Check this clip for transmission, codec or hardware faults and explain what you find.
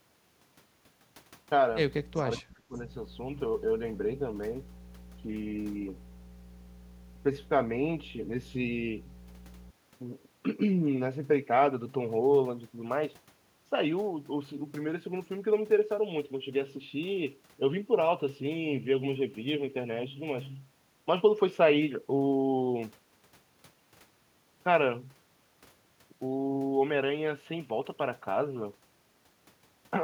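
Three faults are audible in the speech: mains hum, an echo leak, and speech suppressed in double talk.

Mains hum runs from 1.70 to 9.70 s. Power-line interference from a ground loop or nearby transformer adds a steady 60 Hz drone, about 15 dB below the speech.

Echo leak appears from 2.15 to 2.24 s. A faint delayed copy of the speech, around 25 dB down and trailing by 376 ms, was likely let through by an incomplete echo canceller.

Speech suppressed in double talk occurs from 2.21 to 2.31 s, dipping about 10 dB, and from 2.55 to 2.82 s, dropping as much as 25 dB. The echo canceller likely attenuated the talker while both sides overlapped.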